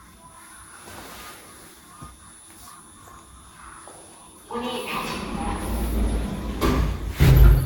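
Everyday sound, likely suffering generation loss from roughly five lossy re-encodes, fitting Vorbis near 66 kbit/s: swirly, hollow and smeared throughout, with blurred attacks and nothing above 17.3 kHz.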